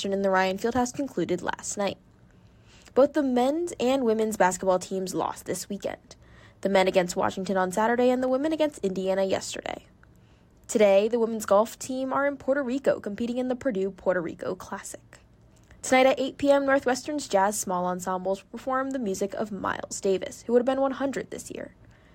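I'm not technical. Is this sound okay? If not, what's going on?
No. There are two sharp clicks, at 8.28 and 19.08 seconds. The likely cause is dropped samples. A tiny sliver of the sound, far under a millisecond, went missing. The sound jumps ahead abruptly and snaps.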